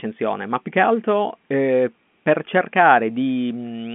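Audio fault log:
No fault to log for this audio.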